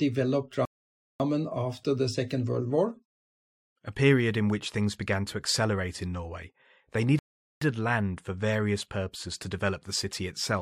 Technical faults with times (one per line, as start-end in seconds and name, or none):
0.65-1.20 rebuffering stall
7.19-7.61 rebuffering stall